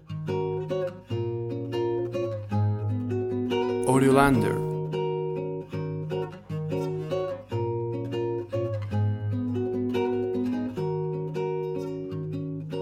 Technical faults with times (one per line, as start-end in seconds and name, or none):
none